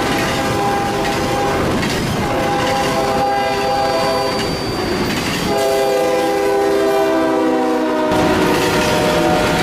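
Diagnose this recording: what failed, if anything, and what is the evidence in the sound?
A thin, steady whistle near 4.6 kHz sits behind the sound from 2.57 s to 6.06 s, roughly 20 dB below it, swelling and fading slowly in level but never building into a howl. This is a feedback whistle, most likely from the acoustic path between loudspeaker and microphone in the analogue stage. The loop gain at that one frequency is sitting just at the edge of instability, so the tone sustains itself without running away into a howl.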